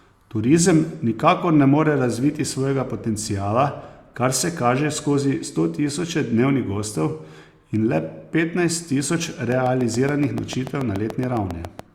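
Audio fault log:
9.52–11.80 s, train of clicks: a regular series of sharp, similarly shaped pulses at about 7.0 per second, roughly fifteen in all, ticking over the speech and through any gaps in it. Their peaks stand around 10 dB above the surrounding signal, so they read as distinct pops rather than a faint crackle. A steady repeating impulse like this is likely interference coupling in from nearby equipment or a faulty connection or power supply.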